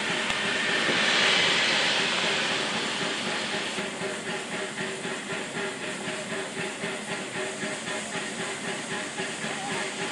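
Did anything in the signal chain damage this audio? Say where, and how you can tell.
Yes. Four very brief glitches, each only a few milliseconds long, break into the sound at 0.30, 3.79, 5.84 and 9.74 s. This is damaged data in a compressed stream at the codec stage: corrupted bytes make the decoder misread frames and lose sync until it locks onto the next frame header.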